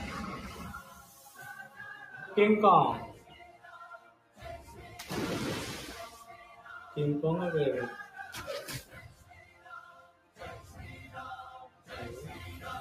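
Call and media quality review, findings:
Pumping, fluttering level with thinned sustains and tails throughout, swings of about 15 dB. Speech-tuned noise suppressor left active on non-speech sound, treating steady content as noise.

Sound cut by the noise suppressor: held material sinks, tails cut short, at 0.82–1.39, 3.15–3.69, 3.98–4.42, 6.4–6.67, 8.84–9.69, 9.85–10.41 and 11.68–11.9 s, dropping about 8 to 11 dB.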